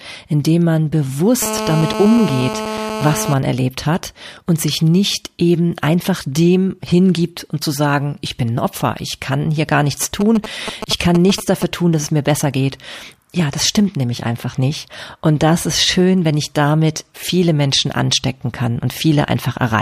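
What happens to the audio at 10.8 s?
GSM signalling bursts from a nearby phone, 10.21 to 11.64 s: rectified radio pulses give galloping ticks and short 217 Hz buzzes, fairly loud, intermittent rather than a steady call buzz.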